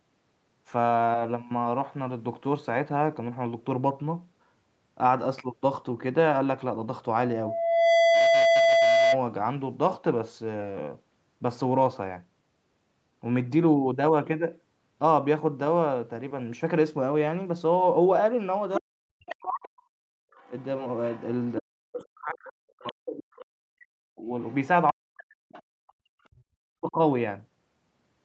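Loudspeaker feedback squeal, 7.17 to 9.23 s: a steady 670 Hz tone swells in under a second until it sits a little above the speech. The microphone is picking up the loudspeaker it feeds, and at 670 Hz that loop's gain exceeds one, so the tone keeps reinforcing itself.

Other side's voice leaking through, 18.74 to 21.53 s: a second, quieter voice runs under the main talker, well below it in level. This is likely loudspeaker playback of the far end that the echo canceller failed to remove from the microphone.

Speech suppressed in double talk, 18.79 to 19.69 s: during that same overlap, the talker's voice dips very deeply for most of the stretch. With both sides talking at once, the canceller likely could not separate the local voice from the loudspeaker echo and turned everything down.

Background gated by the echo canceller, 19.97 to 20.31 s: the room sound drops out by about 33 dB for roughly a third of a second, then returns. 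The canceller clamped the microphone hard while the loudspeaker was playing and released it afterwards.

Speech suppressed in double talk returns, 21.59 to 26.95 s. Across about four seconds of that span, the talker's voice keeps falling away in very deep dips. Inside this window the other side's voice leaks through again in short scraps at 22.87 to 23.45 s, 24.45 to 24.55 s and 25.53 to 25.93 s. Each scrap sits well below the main speech, and the one at 24.45 s is the faintest.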